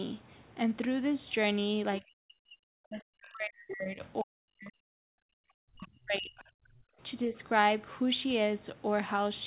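Speech suppressed in double talk, 2.0 to 4.76 s: the speech dips hard, by as much as roughly 40 dB, across about three seconds. Both ends were likely talking at once, so the echo canceller, unable to tell the near talker from loudspeaker echo, turned everything down.

Other side's voice leaking through, 3.25 to 3.33 s: a brief scrap of a second voice surfaces, roughly 25 dB below the main speech. Likely the far end playing from the loudspeaker was only partly cancelled and slipped back into the microphone.

Background gated by the echo canceller, 5.04 to 5.45 s: the room sound drops out by about 40 dB for roughly 0.4 s, then returns. While the loudspeaker played, the canceller clamped the microphone down hard and then released it.

Speech suppressed in double talk recurs from 5.73 to 6.95 s, with the speech sinking by roughly 30 dB over about 0.7 s in total. Inside it, at 5.80 to 5.86 s and 6.37 to 6.44 s, two further short fragments of the other side's voice leak through at a similarly low level. 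The whole clip stays within a band that stops near 4 kHz, which fits a narrowband telephone codec.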